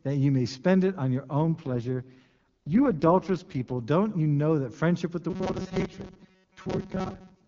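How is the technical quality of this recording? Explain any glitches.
Two faults degrade this speech recording. The AMR-WB (HD Voice) stream carrying it sounds clean at its normal rate, which fits 23.85 kbit/s.

AMR rate drop, 1.42 to 3.81 s, from after "spend it on your" until "don't you know that". The codec switched to a much lower rate, consistent with 6.6 kbit/s, so the voice turns rough and synthetic with the bandwidth intact and no gap.

Robotic sound from repeated short buffers, 5.3 s to the end, after "that friendship with the". The likely cause is late-arriving audio, with most of the gap filled by repeating a roughly 5 ms chunk. This imposes a rigid, metallic 188 Hz buzz over the loosely tracked speech.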